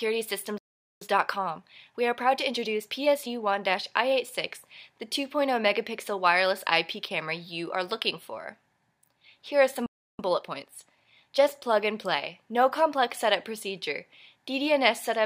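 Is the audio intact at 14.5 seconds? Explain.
Yes, the audio is intact at 14.5 seconds, with no dropout, click, distortion or other fault at that point.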